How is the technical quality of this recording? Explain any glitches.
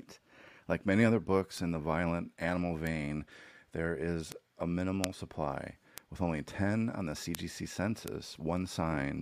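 The recording has seven bit error spikes, at 1.58, 2.87, 4.32 (just after "there is"), 5.04 (between "there is a" and "supply with only"), 5.98 (just before "with only"), 7.35 and 8.08 s. In each, a single flipped bit in memory or on a digital link threw one to three sample values off by a power of two before they snapped back. That brief jump, peaking at about −24 to −6 dBFS, is heard as an isolated, broadband tick unrelated to the speech. The loudest ticks are at 5.04 and 7.35 s.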